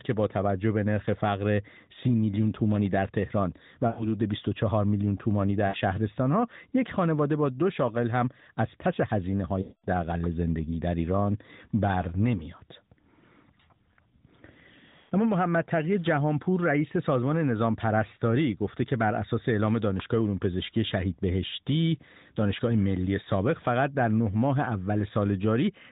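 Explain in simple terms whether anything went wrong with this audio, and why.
Lost AMR speech frames interrupt the speech four times: 3.88–4.06 s, 5.68–5.77 s, 9.62–9.86 s and 15.0–15.14 s. Each time, the mobile decoder covered the gap by repeating the last good sound at falling volume, giving a brief drawn-out, fading stretch before speech resumes.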